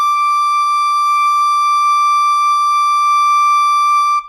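There are no technical faults to describe in this music at any point in time.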